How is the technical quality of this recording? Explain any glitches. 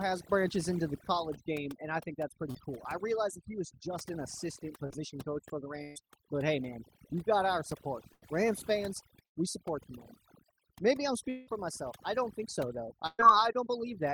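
The recording has processing damage throughout and several network glitches scattered across it.

Throughout, the background drops and breaks up into twinkling, warbling specks. That is overdone noise removal, which pushed noise-adjacent frequency bands down along with quieter parts of the voice.

At 2.51 s, and at 4.87 s between "was just an assistant" and "coach for the", there are brief smears. Each is a short concealed packet loss, in which about 40 ms of lost audio was patched by extending the preceding sound.

At 5.84 to 5.98 s, just after "coach for the" and before "but hey man you've", the sound is held as a buzz or fading hiss, then resumes further on. The same happens at 8.14 to 8.24 s, at 9.26 to 9.38 s, and at 13.07 to 13.21 s after "don't think so though". Each is a burst of packet loss lasting 80 to 120 ms, with the receiver continuing and fading the last sound.

At 11.30 to 11.49 s, the sound stretches into a decaying held tone for nearly two tenths of a second before jumping ahead. 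This is likely a long network dropout, with about 180 ms of audio lost and papered over by concealment.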